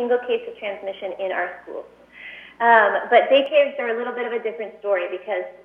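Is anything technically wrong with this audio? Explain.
Yes. From about 3.46 s to the end there's channel delay causing comb filtering: one channel lags by roughly 5 ms, and summed to mono the shared content cancels at evenly spaced frequencies starting near 100 Hz. It goes hollow and phasey.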